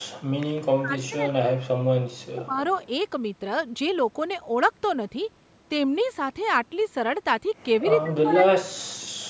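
Right at the start, from 0.0 to 0.1 s, the room background is gated by the echo canceller. It clamps the mic down by about 40 dB while the loudspeaker plays, so the ambience drops to near silence for that first tenth of a second before coming back.

Then the talker's voice gets chopped at 0.59–1.84 s, 2.31–2.61 s and 8.02–8.7 s, sinking by something like 30 to 40 dB in patches. That's likely speech suppressed in double talk: the canceller couldn't separate the near voice from the far-end echo, so it pulled both down.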